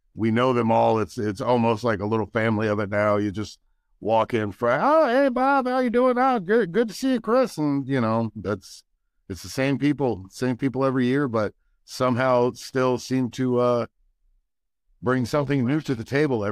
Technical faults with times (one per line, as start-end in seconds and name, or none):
6.75 block of digital silence